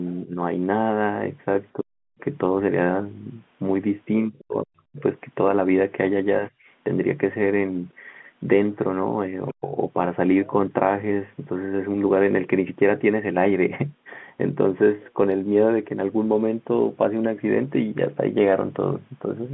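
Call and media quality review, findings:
Speech suppressed in double talk: talker's level dips at 0.24–0.38 s (about 10 dB), 6.40–6.54 s (about 20 dB), and drops nearly out, about 40 dB down, at 1.74–2.24 s, 4.25–5.03 s and 9.51–9.75 s. Likely echo canceller's suppressor clamping the near end while the far end talks. Distinguishing sign: the talker's own voice sinks or gaps in short bursts, with no packet-loss clicks or repeats.

Other side's voice leaking through: faint second voice at 9.48–9.53 s, about 35 dB under the talker, within the narrow telephone band. Likely residual loudspeaker echo the canceller did not fully remove, and immediately followed by the 9.51 s suppression dip. Distinguishing sign: an added foreign voice rather than loss of the talker's own.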